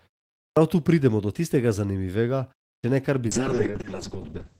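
It's a short speech clip with two kinds of trouble. There are two clipped starts after a pause, where the playback device seems to doze off in silence and lose the front of the next phrase. At 0.5 s about 66 ms goes missing before "tu pridemo do tistega", and at 2.78 s about 57 ms is lost before "če ne kar". Both times the speech pops in abruptly. Then from 3.31 s to the end there's a call bitrate drop. The encoder gets squeezed from 32 down to 6 kbps for about 1.3 s, and the bandwidth collapses from 20 kHz to 8 kHz, so the last stretch goes muffled and rough.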